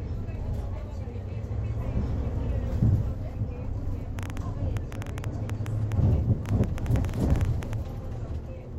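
Train of clicks from 4.19 to 7.74 s: around thirty similar pops at an uneven 8.5 per second, about 10 dB above the sound, likely from nearby interference.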